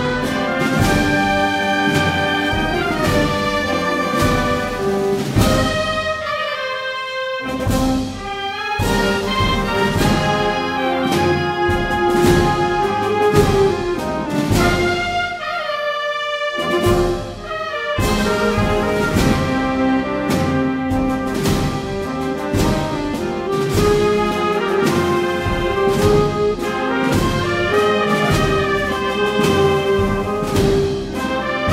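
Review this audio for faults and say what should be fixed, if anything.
No faults can be heard; nothing needs fixing.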